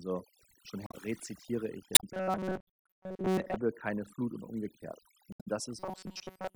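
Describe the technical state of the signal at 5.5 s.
Right around 5.5 s there is a brief chirp, squawk, click or short hole, spanning 5.31 to 5.48 s. This is damaged data in a compressed stream: corrupted bytes made the decoder misread those frames, lose sync and hunt for the next valid frame header.

Underneath, the background is pulled down and dotted with twinkling specks. That is overdone noise removal, present throughout. An overly aggressive noise reducer pulled individual frequency bands down or out whenever they came close to its noise estimate, and quieter parts of the speech were stripped away along with the noise.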